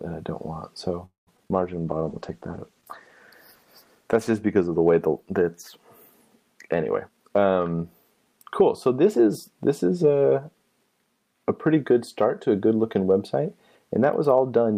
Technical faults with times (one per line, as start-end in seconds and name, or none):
1.05-1.29 call audio freeze
1.37-1.51 repeated packet loss (robotic sound)
1.56-6.25 call bitrate drop
1.79-2.06 jitter buffer slow-down
7.03-8.62 jitter buffer speed-up